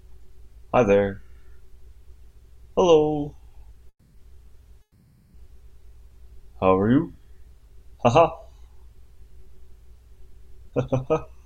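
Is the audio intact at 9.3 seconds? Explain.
Yes, the audio at 9.3 seconds is intact, with no dropout, click, distortion or other fault to be heard there.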